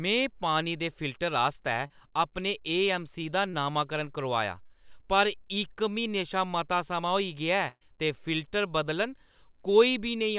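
Speech heard over a narrowband call line, with nothing above 4 kHz, which fits a G.711 A-law path. Short concealed packet loss shows up as brief smears or wobbles at 1.87–1.90, 3.50–3.54 and 4.66–4.70 s, where 20 to 40 ms went missing and the decoder patched each gap by extending the preceding sound. Unlike a dropout, there is no silence. A burst of packet loss at 7.68–7.82 s is longer, about 120 ms. There the continued sound weakens and falls silent for about 30 ms before the speech resumes further on, with that stretch simply gone.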